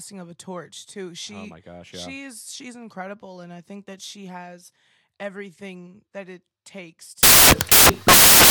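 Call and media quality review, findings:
Samples built from the wrong bytes, 7.23 s to end of clip, right after "everything that it takes". Speech abruptly replaced by loud broadband noise, near-white on louder passages. Probable component: PCM decoder or file reader. Mechanism: byte offset or byte-order misread makes rapidly changing low bits dominate each sample value.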